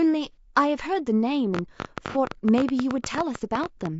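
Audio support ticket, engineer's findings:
Speech coded throughout, likely with low-delay AAC compression (AAC-ELD) at roughly 32 kbps. Short frames resolve pitch harmonics poorly at this rate, so the voice sounds plainly rough and grainy, with noise filling between harmonics and a thin, synthetic-sounding top band.

AAC frame loss with concealment at 0.32–0.37 s and 2.09–2.18 s. Decoder patched the gaps from the last good spectrum, which fits one lost frame and then two. The result is brief smeared, noisy, phasey patches of about 30 ms and 60 ms.

Train of clicks from 1.55 to 3.87 s, probably interference or a faulty connection injecting pulses. About 30 similar clicks, around 11.7 per second at irregular spacing, peak about 15 dB above the signal. They are heard as ticking over speech and in the pauses, and they overlap the second concealment patch.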